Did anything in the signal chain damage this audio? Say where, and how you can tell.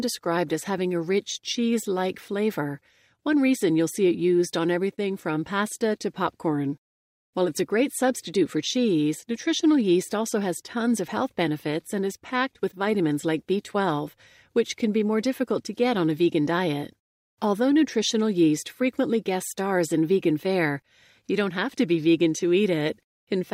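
No, nothing in the signal chain damaged this audio.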